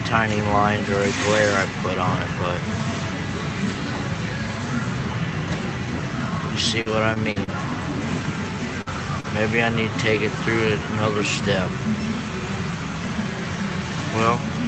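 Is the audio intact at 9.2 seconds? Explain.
No. Between 9.20 and 9.26 s there is a short concealed packet loss: about 40 ms of audio failed to reach the decoder in time, and the receiver covered roughly 35 ms of that gap by extending the preceding sound before crossfading back into the real signal. What you hear is a brief smear or wobble at that point, where the genuine audio is replaced by a stretched-out copy of what came just before.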